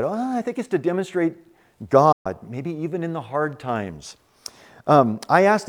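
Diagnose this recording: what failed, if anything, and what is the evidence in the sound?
Digital broadcast dropout at the reception and decoding stage: the speech briefly fades out over about 8 ms and falls silent from 2.12 to 2.26 s, resuming at "maybe even in the". The receiver muted on failed frames, and the gap fits about four lost 32 ms frames. The quick fade and clean silence set it apart from a wiring cut, which clicks.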